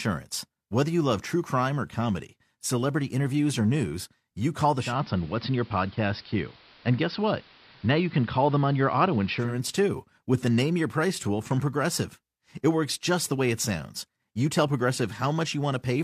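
From 4.78 to 9.58 s the speech turns dull and hissy, and about 1 dB different in level. That is digital radio blending to analogue: the receiver lost the digital signal and cross-faded over 0.2 s to the AM broadcast, then back.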